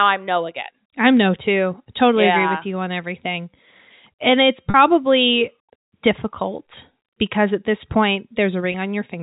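At 4.70 s and 8.72 s, packet loss with pitch repetition: the last pitch period gets looped to cover the gap, a brief buzzy hold lasting 40 ms, then 20 ms.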